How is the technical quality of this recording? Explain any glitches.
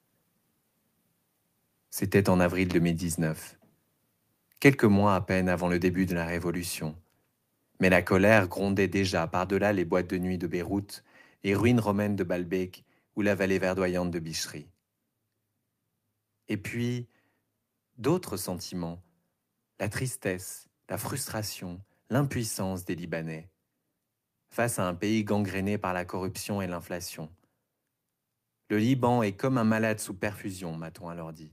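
The recording has two brief overload-and-recovery episodes in the speech. At 4.65–4.69 s, just before "mois à peine avant", and at 8.32–8.38 s, before "grondait déjà", loud peaks turn harsh and crackly. This is likely microphone overload, driving the converter about 3 dB and then about 1 dB past its limit, flattening peak tops.

Right after each overload, at 4.69 s and 8.46 s, voice and background suddenly drop by about 2 dB and then 4 dB. The likely cause is the call software stepping down the microphone volume after detecting clipping.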